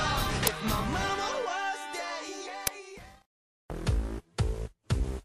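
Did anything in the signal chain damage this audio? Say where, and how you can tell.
Yes. At 0.47 s and again at 2.67 s there is a short, loud crack, each lasting about 5.8 ms, a length that fits a 256-sample buffer. This is an uninitialised buffer fault at the driver or buffer stage: a block went out for playback before any audio had been written into it, so whatever values were left over in that memory were played as if they were samples.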